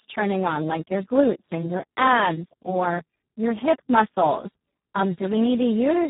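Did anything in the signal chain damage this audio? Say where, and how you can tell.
Yes, at the codec. Speex codec damage runs throughout: hoarse, noisy speech, nothing above 3.8 kHz. Bit-starved excitation fits a 4 kbps setting.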